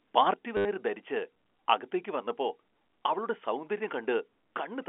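At 0.34 s the speech abruptly drops in level by about 6 dB and stays quieter to the end of the clip, with no fade or recovery. The likely cause is one channel dropping out: once one side of the stereo feed is lost, the mono sum keeps only half of whatever was common to both channels, so the level falls by a fixed 6 dB, and anything carried only by the missing side vanishes with it.

From 0.57 to 0.65 s, an 80 ms stretch turns into a brief robotic stutter with a buzzy tone. This is packet loss with the last packet repeated. Incoming audio stopped arriving, and the receiver kept replaying the final good chunk. Those repeats seldom line up with the pitch of the speech, and the loop produces a buzz around 100 Hz, which fits a run of lost 10 ms packets. All of this sits within the narrow 300 Hz to 3.4 kHz telephone band of the G.711 line.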